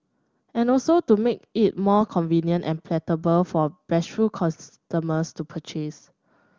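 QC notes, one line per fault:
No faults are heard in this speech. It comes through the AMR wideband (HD Voice) codec at 23.85 kbit/s, its top rate, and that coding leaves at most a faint trace.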